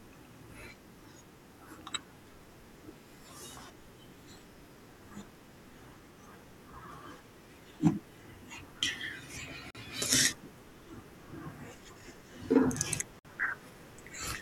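At 9.71 to 9.75 s and 13.19 to 13.25 s the speech breaks for about 43 ms and 55 ms: gaps at joins of encoded pieces, where untrimmed encoder start delay and end padding leave silence. Unlike a dropout, nothing is skipped. The sound resumes exactly where it stopped.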